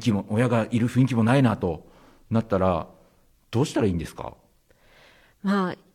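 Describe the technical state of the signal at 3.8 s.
At 3.8 s the speech signal is intact, with no audible technical fault at that point.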